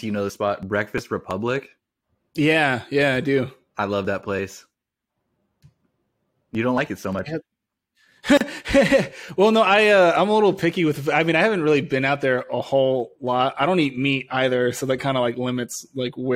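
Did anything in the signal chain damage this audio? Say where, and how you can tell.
Yes. At 8.37 s the speech drops into a 35 ms silence, ending at 8.41 s: a gap at a join of encoded pieces. Each separately encoded piece kept its encoder delay and end padding. Unlike a network dropout, nothing is lost, and the speech resumes exactly where it stopped.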